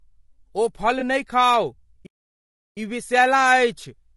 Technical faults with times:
0.00-4.16 low-delay AAC compression
0.99-1.03 AAC frame loss with concealment
2.06-2.77 playback stall

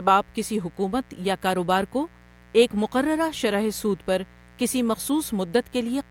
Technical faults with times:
0.00-6.11 mains buzz

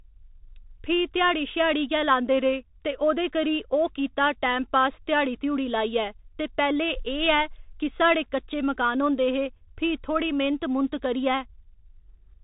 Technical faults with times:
0.00-12.44 Bluetooth CVSD headset codec

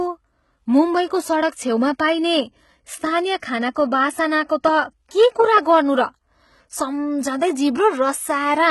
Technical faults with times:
0.00-8.70 HE-AAC compression

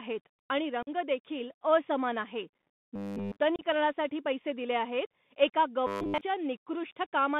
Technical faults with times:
0.00-7.40 Bluetooth CVSD headset codec
0.82-0.89 unconcealed Bluetooth headset packet loss
2.96-3.39 robotic sound from repeated short buffers
3.56-3.62 unconcealed Bluetooth headset packet loss
5.87-6.21 robotic sound from repeated short buffers

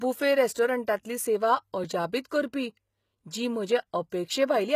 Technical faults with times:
0.00-4.75 HE-AAC compression
1.84 block of digital silence

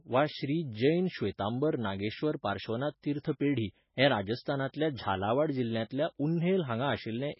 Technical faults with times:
0.00-7.39 MP3 compression

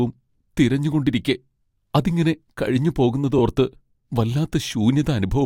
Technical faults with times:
3.38-3.40 repeated frames

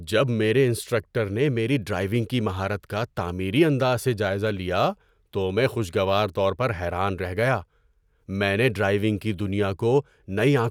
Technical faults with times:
none

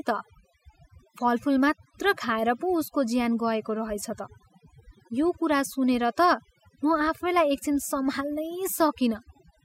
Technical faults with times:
0.00-9.65 overdone noise removal

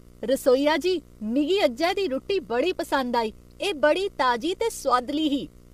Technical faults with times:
0.00-5.73 video or display buzz
0.00-5.73 low-delay AAC compression

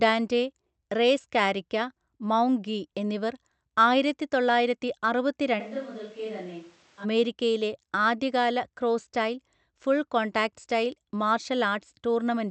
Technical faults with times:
5.61-7.03 switch to a distant microphone

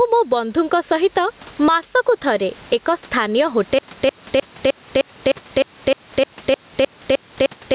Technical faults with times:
0.00-7.74 gain pumping
3.79-7.74 stutter with silent gaps

